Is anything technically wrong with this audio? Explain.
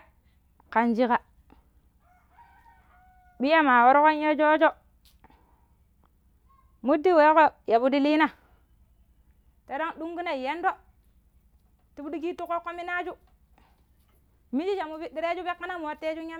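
No, nothing technically wrong stood out on listening to this speech recording.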